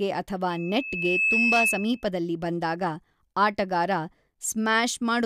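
A loudspeaker feedback squeal runs from 0.50 to 2.08 s in this speech clip: a single tone at 2.6 kHz swells over roughly the first 0.7 s and settles a few decibels above the voice before it stops. The microphone is picking up the loudspeaker it drives, and at 2.6 kHz the gain around that loop exceeds one, so that frequency keeps reinforcing itself until the loop is broken.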